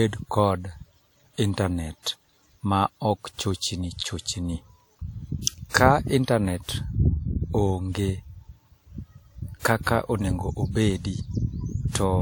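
Pre-echo turns up five times in this speech: 2.03–2.06 s, 5.42–5.47 s, 5.69–5.74 s, 9.59–9.65 s, and 9.83–9.87 s, just before "onego obedi". Each time a sharp onset lands late in a codec block, so noise scaled for the loud attack leaks backwards into the quiet lead-in. You get a short hiss smeared 37 to 54 ms ahead of the onset, which makes the attack sound softened.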